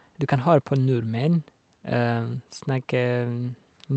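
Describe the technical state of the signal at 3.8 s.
At 3.8 s the speech plays through cleanly, with no dropout, distortion, glitch or other technical fault at that moment.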